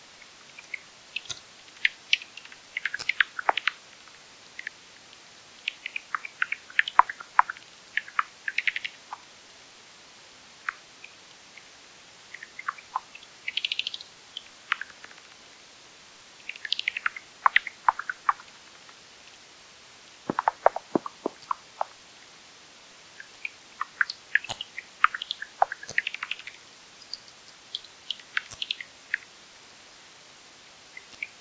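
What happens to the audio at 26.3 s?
Nothing goes wrong at 26.3 s; the sound carries on intact through that moment, with no dropout, click or other fault.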